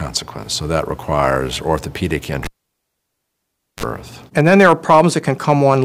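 A cable pulled and plugged in interrupts the audio from 2.44 to 3.83 s. A pop marks the moment the live lead is pulled, and the sound then drops to near silence for about 1.34 s. While only the plug's tip is making contact, a 37 ms burst of 50 Hz mains buzz breaks through, because the ground connection is not yet complete. A second pop follows as the connector seats fully and the sound returns.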